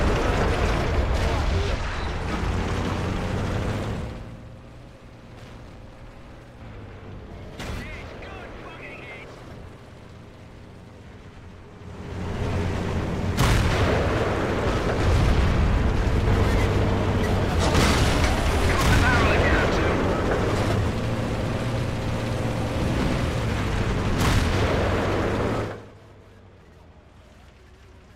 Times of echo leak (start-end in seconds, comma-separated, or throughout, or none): none